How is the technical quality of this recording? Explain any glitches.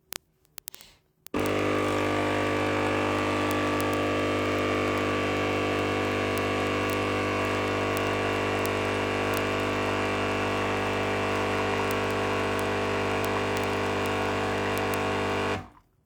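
The quality is poor because of one persistent fault. Word clock ticks run from 0.13 s to 16.05 s, roughly every 0.03 s. An unlocked receiver clock, off by roughly 700 ppm, slips one sample each time. The result is hundreds of sharp, uneven ticks.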